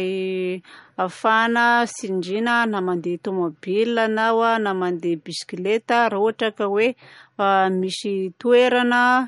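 Speech with MP3 compression damage throughout: treble stops dead at 11.1 kHz, a flat ceiling on a spectrogram, and weak components flicker, sounding watery, which fits a likely low bitrate near 46 kbps.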